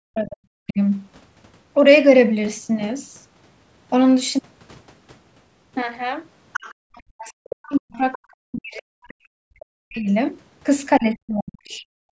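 Right at the start, from 0.1 to 0.79 s, the echo canceller likely mistook both sides talking at once for echo, and the result is speech suppressed in double talk: the speech sinks by as much as roughly 40 dB, so it dips for most of that stretch. The same happens from 6.98 to 10.09 s, over about three seconds, and again from 10.99 to 11.84 s, each time with the talker pushed down hard.

Between 6.53 and 6.74 s, the canceller likely failed to strip all of the loudspeaker signal from the microphone, so the other side's voice leaks through as a short second voice only around 10 dB below the speech. Two fainter scraps follow, a brief one at 8.12 to 8.18 s, about 20 dB down, and a last one at 9.97 to 10.13 s, about 35 dB down. Both sit inside the long suppressed stretch, and the last one runs just past its end.

Finally, from 12.12 s to the end, there is background gated by the echo canceller. 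It clamped the microphone while the loudspeaker was active, and the room sound drops by about 35 dB for roughly 50 ms, a brief hole in the ambience.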